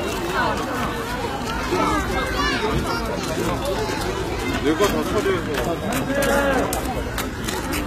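At 0.87 s the audio drops to a lower-bitrate version of the adaptive stream and stays there to the end of the clip. The switch is abrupt, with no gap: the treble thins and takes on a synthetic, swirly quality, with nothing above 14.9 kHz, and codec artefacts rise on the everyday sounds. This fits a fall from a mid-rate AAC stream to a low-rate HE-AAC one after the connection slowed.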